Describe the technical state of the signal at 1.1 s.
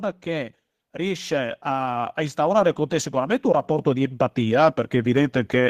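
At 1.1 s the speech is inside an automatic gain rising fault. It runs from 0.23 s to the end of the clip. The gain control judged the input too quiet and keeps lifting its gain. Voice and background swell together, steadily louder.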